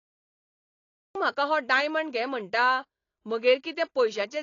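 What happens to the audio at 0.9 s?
At 0.9 s there is only digital silence. This is a cut-off start: the stream began late, and nothing is present from 0.0 s until 1.15 s. There, sound bursts in mid-event, with no attack or fade-in.

The silent stretch also carries no trace of the dull, band-limited character heard once sound arrives. Nothing reaches above 7.2 kHz, and the smearing is plainly audible. This is likely AAC compression, and it fits AAC-LC at around 32 kbps.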